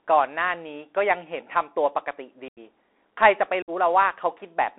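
A Bluetooth CVSD headset codec colours the speech from start to finish. CVSD sends one bit per sample, only saying up or down, with a step size that adapts to the signal, and the plainly audible damage fits a 64 kbps link of this kind. The line passes roughly 300 Hz to 3.6 kHz, so the speech sounds thin and boxed-in. Sibilants turn scratchy, and a fine granular hiss sits underneath.

Unconcealed Bluetooth headset packet loss cuts two holes. The first runs from 2.48 to 2.59 s, with about 86 ms of audio missing, roughly twenty short packets. The second runs from 3.62 to 3.70 s, with about 56 ms gone, around fifteen packets. Nothing fills these gaps, so the speech drops out with hard edges, then resumes briefly quieter as the CVSD step size rebuilds.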